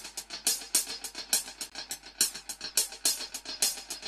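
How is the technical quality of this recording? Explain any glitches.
There is one glitch: a gap between stream segments from 1.70 to 1.72 s. The timestamps of two adjacent segments, which fits a 2-second segment length, leave a hole of about 19 ms. The player fills it with digital silence, so the sound drops out abruptly with hard edges on both sides and then resumes. It registers as a brief click-like break. No audio is missing; the material after the gap is shifted later by that amount.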